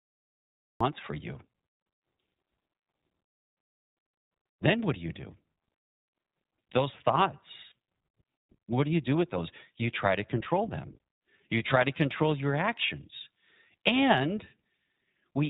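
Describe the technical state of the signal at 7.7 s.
At 7.70 s there are lost iLBC frames: a brief hole, about the length of a single 20 ms frame, where the decoder had no data and filled in by repeating the last pitch cycle blended with noise. It comes across as a tiny held, faintly buzzy smear rather than a click or a silent gap, which distinguishes it from a plain dropout. The sound is back to normal immediately afterwards because each iLBC frame decodes independently. Codecs that carry state between frames would instead leave a short tail of distortion after the loss.

That moment also sits inside the iLBC codec coding that runs through the whole clip. The signal is narrowband, with nothing above 4 kHz, and the bandwidth and character fit the 15.2 kbps mode with 20 ms frames. The codec damage is plainly audible as a slightly rough, synthetic texture. This steady coloration is present throughout, which sets it apart from the momentary concealment at 7.70 s.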